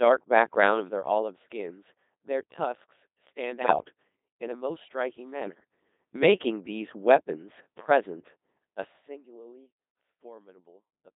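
Codec 2 vocoder, throughout the clip: the speech is rebuilt from sine waves driven by pitch, voicing, energy and a coarse spectral envelope, so the original waveform is gone. The result is heavily damaged, robotic and buzzy, with a hollow synthetic edge and a narrow band of about 200 Hz to 3.7 kHz. The sound points to a very low-rate mode, which fits 2.4 kbit/s. The gentle fader-like level moves ride on top of this.

Bit errors on digital voice radio, from 3.61 to 3.92 s and again from 5.42 to 5.60 s: corrupted bits, around one in twenty, reach the vocoder. Each flipped bit sets the pitch, loudness, voicing or spectral shape of a whole frame, so frames decode wrongly. The voice lurches in pitch and level and changes tone colour abruptly, breaking into warbles, bleeps and garbled robotic gibberish. The first burst is longer and more sustained.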